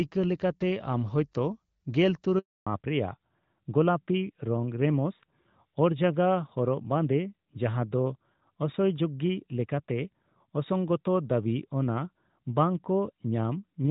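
Speech over a mobile call, and at 2.39 s there's a handover gap: the network switch drops every frame for 280 ms, so the sound cuts to silence until 2.67 s. From 2.67 s to the end there's a fallback to narrowband. The clear HD Voice band at the start, which sounds like AMR-WB at around 12.65 kbit/s, gives way to a duller, rougher sound with nothing above 4 kHz, which fits AMR-NB at 12.2 kbit/s.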